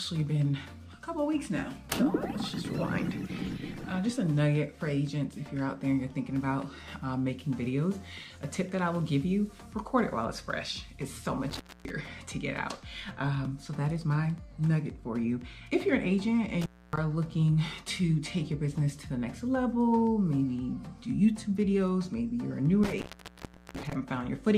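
Intermittent contact breaks the signal three times: at 11.5 s, 16.61 s and 22.83 s. A loose connection opens briefly. The audio drops out for about 0.26 s, 0.27 s and 0.73 s. Each gap has crackle at its edges and faint hiss underneath.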